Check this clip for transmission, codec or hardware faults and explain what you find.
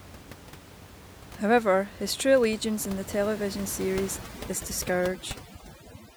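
One fault appears near the end of this speech clip, with room noise sitting about 15 dB below the speech before it. From 4.17 s to the end at about 6.17 s, overdone noise removal sets in. A noise suppressor acting too aggressively switches off individual frequency bands that fall near its noise estimate, taking quiet speech detail with them. The background drops and breaks up into twinkling specks. On a spectrogram, the gaps between speech go blank and show isolated flickering dots.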